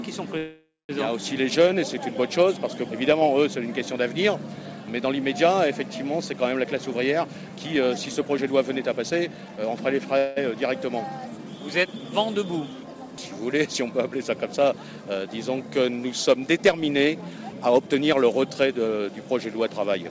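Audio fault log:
0.38–0.91 s, call audio freeze: the sound stretches into a fading buzz, drops to about 0.21 s of silence, then resumes where it stopped, most likely because delayed packets let the jitter buffer run empty.
6.64–10.02 s, jitter buffer speed-up: the audio runs about 9% fast at unchanged pitch and sounds hurried, as the buffer trims short pitch-period slices to shed roughly 0.3 s of excess delay.
10.18–10.38 s, call audio freeze: a brief fading buzz holds the sound for 0.18 s before it resumes without loss, likely from packets arriving late and briefly emptying the jitter buffer.
16.57–18.33 s, jitter buffer speed-up: the audio hurries about 10% at the same pitch, with tiny repeated cuts removing around 0.2 s of buffered backlog.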